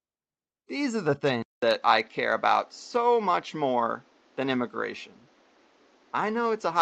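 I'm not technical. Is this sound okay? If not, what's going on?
No, not quite. At about 1.42 s, right after "are the", the sound drops out for a fifth of a second, then comes back duller and flatter, with faint new background noise underneath, and stays that way to the end. That pattern points to an input switched to a poorer device, most likely the recording jumping to a different microphone or a headset. The new one loses the crisp top end above about 7.6 kHz, though the loudness stays the same.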